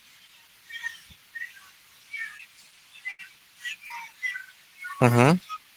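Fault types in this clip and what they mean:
short concealed packet loss: A few hundredths of a second of the stream arrived too late to play. The receiver patched each hole by extending the preceding sound, then blended back. Near 2.37 s and 3.87 s this leaves brief smears over gaps of 20 and 40 ms.
burst of packet loss: Several packets in a row were lost, so about 80 ms of audio is missing from 3.11 to 3.21 s. The receiver stretched the last sound across the hole and faded it down. Then the audio jumps ahead, the middle part gone.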